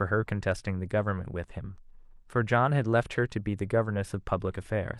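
Nothing stood out on listening to this recording of speech.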